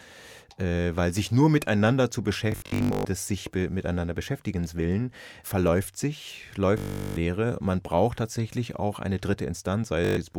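Bluetooth stutter occurs at 2.52 to 3.05 s, 6.78 to 7.17 s and 10.05 to 10.17 s. Audio packets arrived late or not at all, so the receiver kept replaying its last short slice, roughly 15 to 25 ms long, producing a buzzing, machine-gun repetition. The first burst loses about 406 ms scattered over 528 ms, with its longest unbroken run 122 ms. The second loses 386 ms and the third 122 ms. Each time the speech resumes further along, as if it had kept playing.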